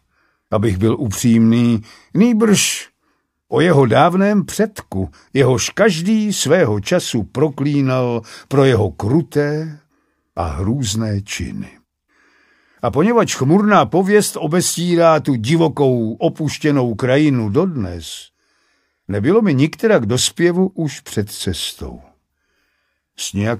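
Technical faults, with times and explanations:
No technical faults, with times and explanations, can be given here, because none are heard.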